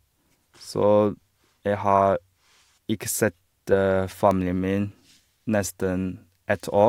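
A speech recording carrying a single electrical switching spike at 4.31 s: a sharp, dry snap laid over the voice that lasts only a millisecond or so and peaks somewhere around -15 dBFS. It is likely a nearby switch, relay or static discharge arcing and coupling into the audio line. On a waveform it shows as one isolated needle standing out from the speech envelope, and on a spectrogram as a thin vertical stripe spanning the full frequency range.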